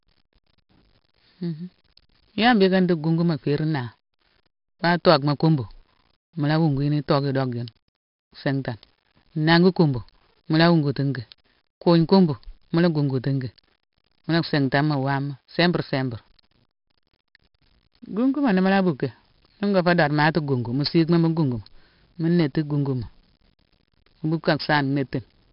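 4-bit ADPCM compression runs through the whole speech clip. Each sample is coded as a coarse 4-bit step from a predicted value, so the error rises and falls with the signal, laying a gritty hiss over every loud syllable. The damage is heavy: consonant attacks distort where the step size lags behind sudden jumps. Nothing is present above 5.3 kHz, which dulls the sound and fits a low-rate stream of about 44 kbps.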